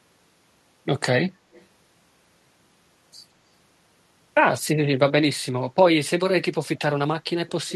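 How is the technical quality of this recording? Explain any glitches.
There is one glitch. From 1.52 to 1.66 s there is an echo leak: a very faint copy of the speech 170 ms late, likely loudspeaker pickup an echo canceller missed.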